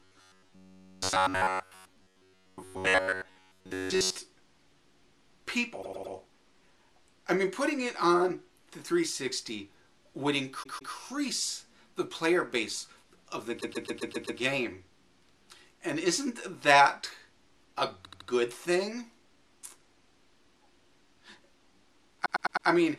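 From 0.01 to 4.18 s the sound becomes a rigid, metallic buzz at 93.8 Hz. This robotic sound most likely comes from repeated short buffers of about 10.7 ms, which replace most of the real audio. On a spectrogram it appears as an evenly spaced harmonic comb at multiples of 93.8 Hz with regular vertical striations. Repeated frames then cause stutters at 5.81–6.13 s, where a 104.5 ms block plays three extra times; at 10.62–10.93 s, where a 156.7 ms block plays twice more; at 13.60–14.38 s, where a 130.6 ms block plays six more times; at 18.04–18.27 s, where a 78.4 ms block plays three more times; and at 22.25–22.66 s, where a 104.5 ms block plays four more times. Together these add about 2.06 s to the audio. The waveform shows identical segments copied back to back.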